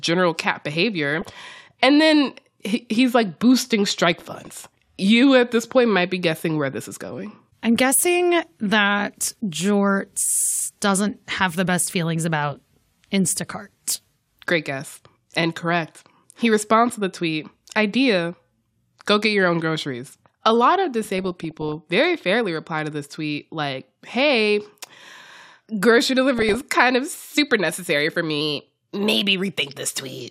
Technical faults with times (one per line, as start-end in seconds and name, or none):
1.17-1.38 DAB burbling
4.13-4.67 DAB burbling
5.02-5.76 drift correction step
21.18-21.75 DAB burbling
26.39-26.61 DAB burbling
28.41-29.22 drift correction step